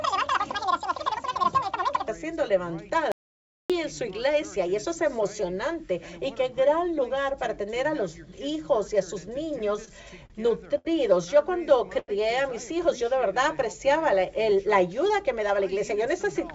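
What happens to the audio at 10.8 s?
A short stall from a late packet runs from 10.78 to 10.87 s. The jitter buffer ran dry, so the last sound is held for about 70 ms, with a faint buzz or dip. Unlike a dropout, nothing is skipped: playback resumes exactly where it stopped, just 70 ms later.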